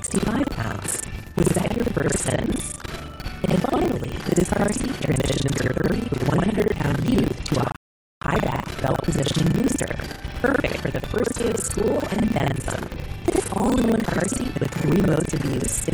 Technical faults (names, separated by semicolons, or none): buffer tearing; rebuffering stall